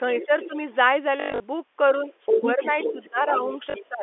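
From 0.17 to 0.57 s, a second, fainter voice sits under the speech, about 10 dB down. This is the other side's voice leaking through. The likely cause is the talker's loudspeaker feeding the microphone, with the echo canceller leaving a residue. Overlapping it, from 0.25 to 0.52 s, the main speech dips by around 10 dB in patches adding up to about a tenth of a second. This is speech suppressed in double talk. Both sides were likely talking at once, and the canceller turned everything down.

From 1.20 to 1.44 s comes packet loss with the last packet repeated. About 180 ms of audio is missing, scattered over 240 ms, with the longest gap 100 ms. Each gap is filled by replaying the previous chunk. The longer run buzzes with a robotic stutter. That buzz fits 20 ms packets, a 50 Hz repeat.

From 2.06 to 3.49 s the speech is suppressed again. It drops by around 10 dB, for about half a second in total. 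This is likely the same double-talk clash. From 2.20 to 3.86 s the leaking voice returns, louder this time, only about 5 dB under the speech. A likely residual echo carries it. Inside that stretch, from 3.70 to 3.74 s, another 40 ms of packets are lost and repeated, giving a brief stutter.

From 3.89 s to the end, the speech is suppressed once more, likely by the canceller. The drop reaches around 20 dB over roughly 0.15 s.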